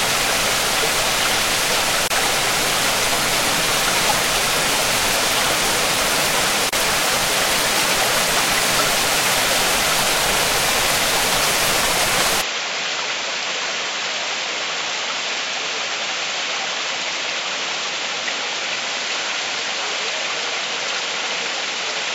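A recording of everyday sounds, it has two short dropouts, each a gap at a join of encoded pieces, at 2.08 to 2.10 s (about 29 ms) and 6.69 to 6.73 s (about 35 ms). The sound breaks off abruptly and resumes exactly where it stopped, the pattern left when separately encoded segments are butted together with their encoder start delay and last-frame padding still in place. On a waveform each shows as a flat notch with sharp but slightly smeared edges, and on a spectrogram as a thin vertical blank stripe across all frequencies. From 12.41 s to the end the character changes at once, with no silence at the transition. The level drops by about 5 dB, the tone turns duller, and a new noise floor appears about 45 dB below the signal. This is likely an input switched to a poorer device. On a spectrogram everything above 7.6 kHz vanishes from that point, leaving a hard horizontal ceiling, while the waveform envelope steps down slightly.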